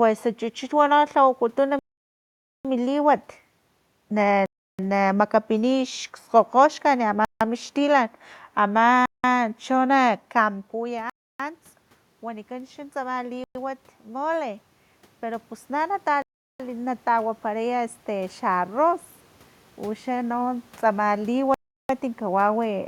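The sound drops to dead silence at 1.79, 4.46, 7.25 and 9.06 s, for about 0.86, 0.33, 0.16 and 0.18 s, then resumes where it stopped. These are Bluetooth stalls, likely caused by the headphone buffer running dry while delayed packets were resent. Unlike a noisy dropout, the silence is complete, and the room noise vanishes with it. From 10.73 to 18.84 s, after the talker drops back around 10 s, automatic gain rising lifts the level about 10 dB, so voice and background noise swell together rather than just the voice. Further stalls cut in at 11.10, 13.44, 16.22 and 21.54 s, lasting about 0.30, 0.11, 0.38 and 0.35 s.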